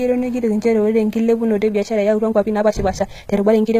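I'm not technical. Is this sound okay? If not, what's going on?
No. The whole recording has the gritty, plainly metallic treble typical of HE-AAC compression, on s sounds. The likely cause is a low-quality compression format that rebuilds the high end by copying lower tones upward rather than keeping the real ones, and nothing survives above about 14.9 kHz.

From 1.68 s to the end at 3.79 s there is a time-stretched section. The speech suddenly runs about 1.64 times faster while the pitch stays the same, so it sounds rushed. Software likely squeezed that part to fit a shorter length by dropping small slices of sound.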